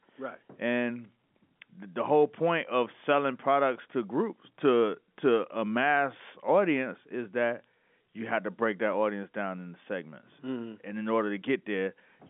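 Speech carried over G.711 telephone coding, limited to the 150 Hz to 3.5 kHz line band with nothing above 3.8 kHz, with no technical faults.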